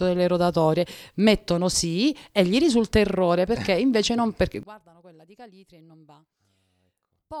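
A speech clip. From 4.63 s, just after "eh invece non perché", the sound collapses by about 27 dB and stays faint to the end. This is likely one channel inverted. Reversed polarity makes the shared centre content cancel when the two channels are summed to mono.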